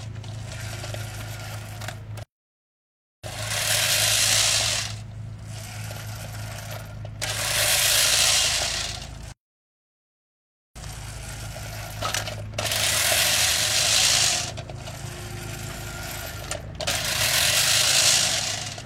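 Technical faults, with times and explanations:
2.23–3.24 s and 9.32–10.76 s, playback stall: The sound cuts off mid-flow twice, going silent for about 1.0 s the first time and about 1.4 s the second, before carrying on. The likely cause is the player running short of data or its thread being held up, leaving the output with nothing to play until it recovered. On a waveform each stall shows as a flat stretch with no activity, and on a spectrogram as an empty vertical band across all frequencies with abrupt edges on both sides.
13.16–13.19 s, damaged data in a compressed stream: A brief disturbance lasting about 30 ms interrupts the sound. Part of the compressed stream here was corrupted, so the decoder could not read those frames properly, lost its place, and had to search for the next valid frame header before decoding normally again. On a spectrogram it shows as a narrow vertical strip about 30 ms wide that breaks the surrounding pattern, and on a waveform as a short, sharp irregularity.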